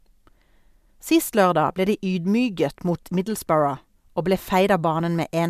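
No technical faults can be heard anywhere in the speech.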